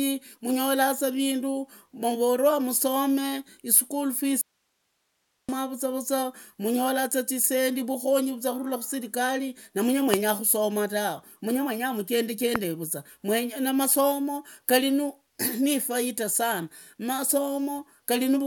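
A speech recording with an audio dropout to a faint residue from 4.41 to 5.49 s, just after "musomaa ischool": the speech cuts off abruptly for about 1.07 s, leaving only hiss far below the speech level. The likely cause is a brief loss of the incoming signal while the later stages kept running. Two loud pops, each a single sharp click lasting about 20 ms and standing far above the speech, land at 10.14 s, right after "kurula muserekali na mange", and at 12.56 s, while the speech carries on underneath. They are likely voltage spikes from a plug, switch, static discharge or driver glitch.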